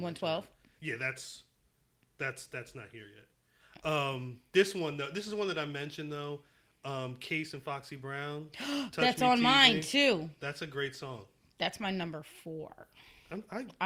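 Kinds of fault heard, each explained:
No technical faults can be heard in this speech recording; the signal remains continuous and intact throughout.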